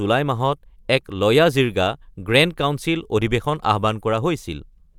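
Nothing in the recording trips the ear at any point, with no faults turning up anywhere along the way.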